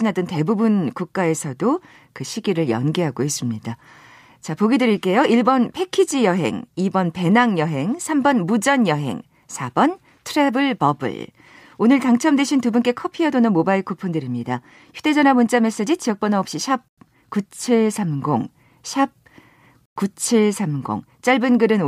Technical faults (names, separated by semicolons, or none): Bluetooth stall